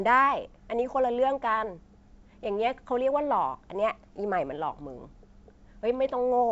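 Speech over G.722 wideband coding at 64 kbit/s, with nothing to flag.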